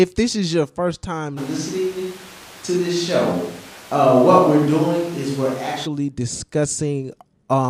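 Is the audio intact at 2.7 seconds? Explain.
No. Right after "this is your first", at 1.39 s, the sound turns roomy and hollow with thinner bass and audible background noise, likely from a switch to a distant microphone replacing the close one, until it snaps back at 5.85 s. The level barely changes.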